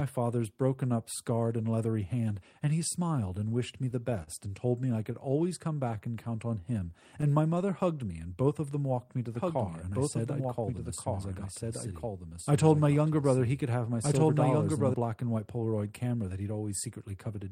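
A packet arriving late left the jitter buffer empty at 4.23 s in this speech recording. The receiver held the last sound for 39 ms, from 4.23 to 4.30 s, then carried on from exactly where it stopped. Nothing is lost, but that moment of the voice is drawn out with a faint buzzy hold, a short stall from a late packet that pushes everything after it about 39 ms later. From 4.93 to 5.92 s a handful of packets, around seven, went missing or arrived too late, each one on its own. The receiver covered each small hole by extending the preceding sound, so these scattered short gaps fill roughly 70 ms in total. None is longer than about 15 ms. The voice stays clear through the stretch, with only brief ticks and small smears spread across it. Right after that, from 5.97 to 8.37 s, the jitter buffer was short of reserve and stretched the audio to build some back. It repeated pitch periods and fragments of pauses until 136 ms had been added, which puts playback at 95 percent speed. 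This jitter buffer slow-down keeps the pitch unchanged, so the speech just sounds a little slower and more drawn out. Between 9.35 and 14.94 s a second copy of the same audio plays underneath the first. It trails by about one and a half seconds and sits about 5 dB lower. It is full-band and dry, with no decay or room colour, and it starts and stops abruptly. This doubled audio track likely comes from the signal being captured a second time through a slower path. Overlapping that section, from 10.22 to 12.13 s, the jitter buffer was holding more audio than its target and trimmed short slices of one or a few pitch periods, about 150 ms in all, to bring the delay back down. This jitter buffer speed-up runs the speech at 107 percent speed with the pitch unchanged, so the delivery sounds slightly hurried.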